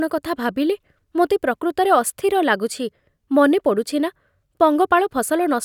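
No technical faults can be heard anywhere in this speech recording. Nothing in it calls for a timestamp or a closer look.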